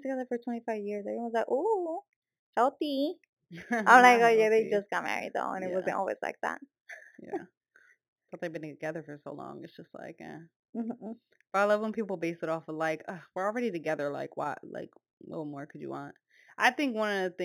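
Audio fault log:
Throughout: imaging from linear upsampling; a dulled top and faint metallic shimmer on sibilants come from weak mirrored copies sitting at 4 to 8 kHz, above the speech band rather than folded into it as aliasing would be.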